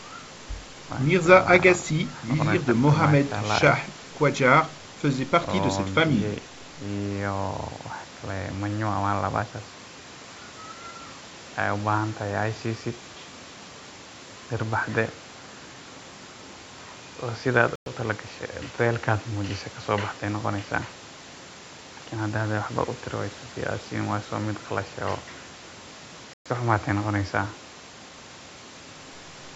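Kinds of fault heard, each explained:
Bluetooth dropout: the speech cuts to abrupt silence from 17.76 to 17.93 s and from 26.33 to 26.47 s, likely from packets lost on the wireless link. Unlike a stall or buffer underrun, it resumes further on, as if it had kept playing.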